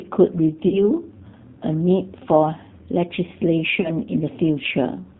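The G.729 codec is heard throughout the speech. The sound is rebuilt from a vocal tract filter, a pitch predictor and a sparse set of pulses per frame, which fits an 8 kbit/s coder of the G.729A type. Nothing above 4 kHz survives, so the speech is band-limited and dull. The coding damage is plainly audible as a rough, slightly synthetic edge on the voice.

VoIP packet loss concealed by the speech codec strikes at 0.68 to 0.81 s and again at 3.81 to 3.91 s. Audio went missing, about 40 ms the first time and 30 ms the second, which fits runs of 10 ms frames. The decoder filled each gap by carrying its last pitch and filter forward with falling gain, so the sound smears into a brief buzzy tone or coloured noise that fades. The speech stays weakened for a short moment after each gap ends, because each frame builds on the previous one.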